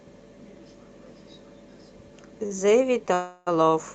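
At 2.46 s a packet failed to arrive on time and the jitter buffer ran dry, producing a short stall from a late packet. The receiver filled the wait by stretching the last stretch of speech for about 39 ms, to 2.52 s, then resumed exactly where it had stopped. Nothing is lost, but the speech lags 39 ms further behind from here, and the held sound carries a slight buzz or dip.

From 3.14 s to 3.49 s there is a call audio freeze, likely caused by packets being held up in transit until the jitter buffer emptied. For 329 ms the receiver kept extending the last sound, which turns into a buzzy, fading hiss. It never drops to full silence. When the packets arrive, the speech picks up from the point where it froze, so a gap has been inserted with nothing missing, adding 329 ms of delay.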